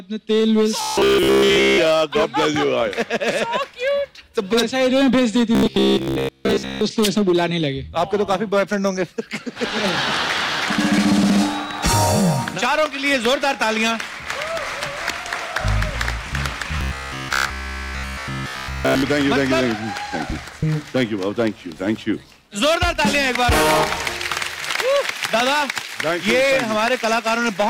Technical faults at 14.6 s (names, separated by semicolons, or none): hard clipping